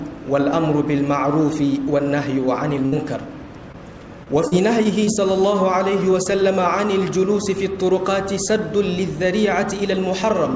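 A burst of packet loss at 2.86 to 2.94 s: about 60 ms never arrived, so the last sound is stretched and faded before the audio resumes with that stretch gone.

Short concealed packet loss at 3.72 to 3.76 s: roughly 20 ms went missing, and the patched-in continuation leaves a brief smear before blending back.

Repeated packet loss (robotic sound) from 4.24 to 5.09 s: four separate gaps, the longest 35 ms, covering about 11% of the span. The repeated patches give a choppy quality with small pieces missing.

Throughout, the WebRTC call path leaves nothing above 8 kHz, which fits a G.722 codec at 64 kbps.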